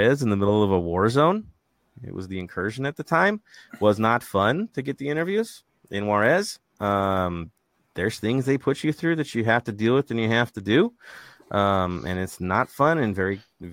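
No faults can be heard anywhere in the recording.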